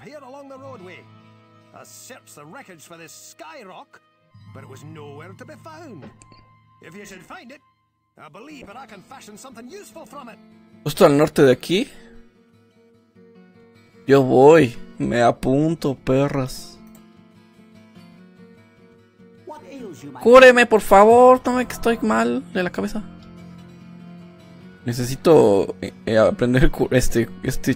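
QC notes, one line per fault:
8.63–10.85 s, call bitrate drop: the sound goes rough and muffled for about 2.2 s, which fits the encoder being squeezed from around 96 kbps down to roughly 25 kbps. Coarser coding and trimmed highs, then it recovers.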